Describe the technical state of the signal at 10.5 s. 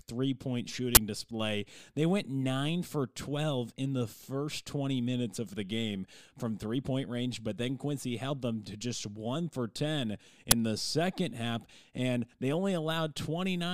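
At 10.51 s an uninitialised buffer plays: one 10 ms block of stale memory read as samples, a loud crack, unlike a silent dropout or single-sample click.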